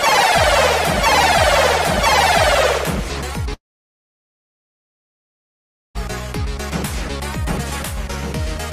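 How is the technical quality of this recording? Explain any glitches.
One serious glitch interrupts the recording. From 3.53 to 5.97 s, sound fades to a brief buzz, then silence. A long network dropout likely lost this 2.4 s stretch.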